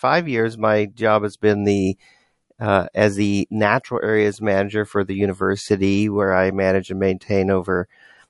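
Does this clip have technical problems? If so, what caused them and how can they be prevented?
Yes. Throughout the speech faint detail swirls in and out, which is likely MP3 compression at a low bitrate near 48 kbps. The fluttering, watery texture, not just dullness, separates it from a plain low-pass filter. Encoding at a higher bitrate, or in a lossless format, would prevent it.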